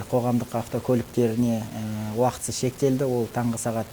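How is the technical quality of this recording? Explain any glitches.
The technical quality is poor: a coarse, grainy distortion runs through the whole recording. This is low bit depth without dither. The sound has likely been truncated to about 6 bits, so every sample snaps down to one of a few coarse steps, leaving error roughly 20 dB below the signal. Because that error tracks the waveform, the grit rises and changes with the sound and quiet passages sputter or drop out. Steady hiss, or dithered reduction, would stay constant instead.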